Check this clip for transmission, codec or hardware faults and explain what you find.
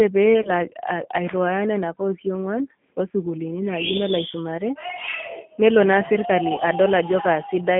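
Two faults are present in this speech: G.729 coding throughout, and two short dropouts concealed by the codec.

The G.729 codec runs for the whole clip at 8 kbit/s over a telephone band of roughly 150 Hz to 3.4 kHz. Each 10 ms frame is rebuilt from a vocal tract filter, a pitch predictor and a sparse set of pulses. No content above the band passes, and the coding damage is plainly audible as a rough, slightly synthetic texture.

VoIP packet loss concealed by the speech codec occurs at 0.42 to 0.50 s and again at 6.55 to 6.61 s, with about 30 ms of audio lost each time, which points to a single missing packet. The decoder filled each gap by repeating its last pitch and filter settings at falling gain. The result is a brief buzzy or smeared stretch, and the sound stays weakened for a short while after the stream resumes.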